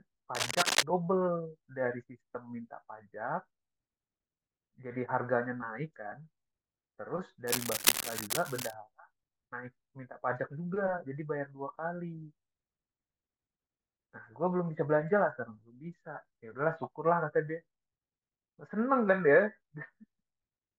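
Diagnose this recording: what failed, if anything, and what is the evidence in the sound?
Dense, uneven scratching and rustling sits over the speech from 0.35 to 0.83 s and again from 7.47 to 8.74 s, roughly as loud as the voice itself. The stage is the analogue wiring. The likely cause is cable scratch noise: a worn cable, connector or control being moved, so its contact resistance jumps about rapidly and injects irregular bursts of noise into the signal for as long as the movement lasts.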